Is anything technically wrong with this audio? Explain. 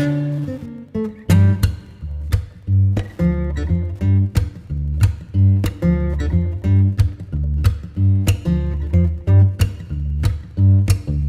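Yes. Wi-Fi interference runs throughout. A nearby radio's beacon, every 102.4 ms, is rectified by the circuit, leaving a faint, steady ticking about ten times a second beneath the sound.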